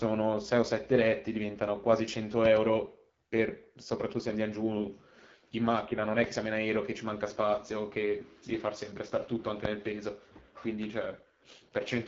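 Right from the start the whole clip carries the sound of the AMR wideband (HD Voice) codec, and the damage is plainly audible. Speech comes through rough and raspy, the way this codec sounds when it's squeezed into one of its lowest modes, which fits something like 8.85 kbit/s. The vocal tract model only gets a thin pulse excitation to work with. The top end stops around 7.4 kHz, and the band just below that is filled with shaped noise, so there's a hissy, slightly artificial sheen.

Between 2.45 and 2.59 s there's a loud pop, actually two sharp hits in quick succession, peaking something like 15 dB above the speech, which keeps going underneath. Then at 9.65 to 9.68 s a single pop lands at a similar level. Both sound like a voltage step or spike hitting the signal, most likely from a plug, a switch, static or a driver glitch, with the downstream circuitry shaping it into that snappy thump.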